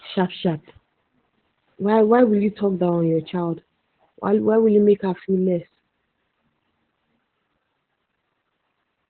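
Throughout, the speech has gone through Opus voice compression at a very low rate, consistent with about 8 kbps using the narrowband SILK coder. Nothing survives above 4.3 kHz, so it sounds muffled, and coarse excitation coding makes it hoarse and slightly robotic.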